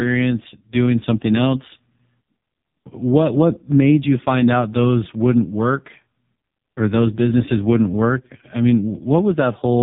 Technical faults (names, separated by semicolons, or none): AMR narrowband mobile codec